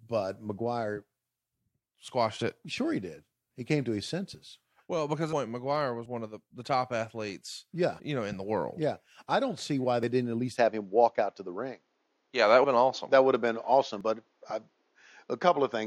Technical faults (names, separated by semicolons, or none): audio missing between chunks; compressed frames skipped; input switched to a poorer device